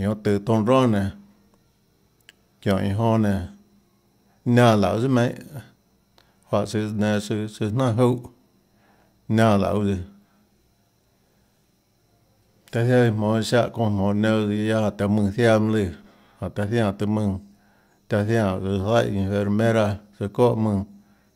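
No technical faults can be heard anywhere in it.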